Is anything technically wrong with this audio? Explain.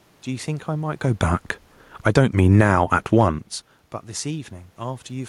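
Yes. Automatic gain falling, from 1.03 s to 3.27 s: the gain control judges the incoming speech too loud and steadily turns its gain down, by about 4 dB across those two seconds. Because the reduction applies to everything the microphone picks up, the voice and the room noise sink together, a gradual dip rather than a sudden step. That shared drop separates it from the talker's movements near 1 s and 3.5 s, where only the voice level shifts.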